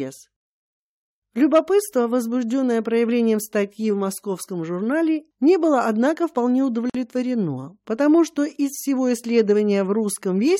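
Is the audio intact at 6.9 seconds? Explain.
No. There is a gap at a join of encoded pieces from 6.90 to 6.95 s, a silence of about 48 ms. The audio was apparently encoded as separate pieces and butted together without trimming, so the encoder's start-up delay and the padding on the final frame remain as dead air. The continuous sound drops out abruptly, with edges softened by the codec, then resumes exactly where it left off.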